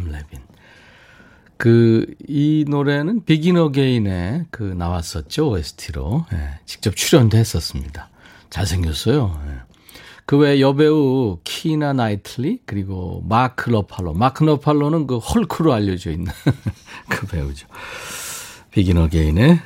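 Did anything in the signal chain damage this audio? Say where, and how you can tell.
No, no signal-chain damage heard.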